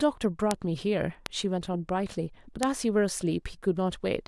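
Three bit error spikes tick through the speech, at 0.51, 1.26 and 2.63 s. A single flipped bit throws a sample value by a power of two, then it snaps back. The first and third are one sample, peaking near about -5 dBFS. The second spans three samples, about -11 dBFS. Each is a sharp, broadband click unrelated to the voice.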